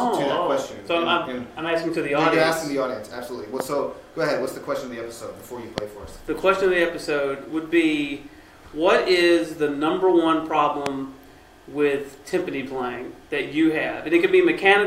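A sudden voltage step or pulse, most likely from a plug, switch, static discharge or driver glitch, is getting into the signal path three times, producing a loud pop each time. The pops fall at 3.60 s, 5.78 s and 10.86 s, each lasting about 0.02 s. The first two peak roughly 15 dB above the surrounding audio and the last roughly 20 dB above it. Each is a single sharp thump over the sound, which continues underneath without a break.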